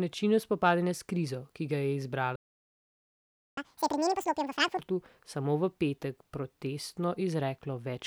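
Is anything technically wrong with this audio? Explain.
Yes, the speech is interrupted by a playback stall and then rushed by a catch-up at higher speed.

From 2.36 s to 3.57 s the speech cuts out mid-flow for about 1.21 s. The likely cause is the player running dry of buffered data or its output thread being blocked, so nothing reached the output until it recovered. On a waveform this is a flat line of silence; on a spectrogram, a clean vertical band of black across all frequencies, with abrupt edges on both sides.

From 3.57 s to 4.79 s the player works off its backlog by resampling at 2.0 times normal rate, so the speech runs twice as fast and its pitch jumps by around ten semitones, giving a chipmunk-like, hurried quality before it snaps back to normal. On a spectrogram the harmonics and formants shift sharply upward and look compressed in time. On a waveform the cycles bunch tightly together for that stretch.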